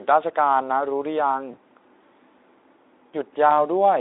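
VoIP packet loss concealed by the speech codec occurs at 1.51 to 1.58 s and 3.49 to 3.65 s. Each gap, consistent with one lost 20 ms frame, is filled by the narrowband Speex decoder repeating its last pitch and filter. The result is a brief buzzy or noisy smear that stays weakened until the decoder recovers.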